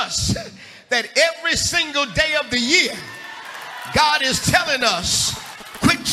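From 4.34 to 5.86 s there's GSM signalling burst interference. A nearby 2G phone is handshaking with the network, and the audio circuitry rectifies those radio bursts into a galloping dit-dit-dit of short buzzes at about 217 Hz, sitting roughly 15 dB under the sound.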